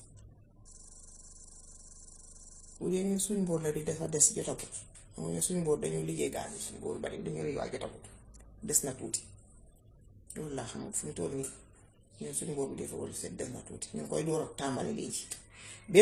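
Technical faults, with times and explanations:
Throughout: transcoding between lossy codecs. Two sets of compression artefacts sound layered, likely from low-bitrate MP3 re-encoded as HE-AAC, keeping the lowest band limit in the chain.
0.68 to 2.79 s: system hang loop. One 40 ms slice of speech repeats over fifty times, giving a rough 25 Hz buzz while the system froze.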